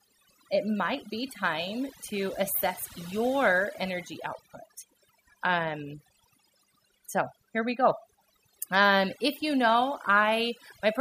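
A speech recording that is processed from start to finish, with the background pulled down and broken up into twinkling specks. This is overdone noise removal: the reduction was set so aggressively that frequency bands near the noise estimate are cut away, taking quieter parts of the voice along.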